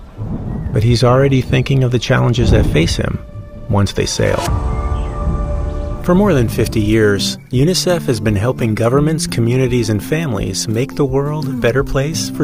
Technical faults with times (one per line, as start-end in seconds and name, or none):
none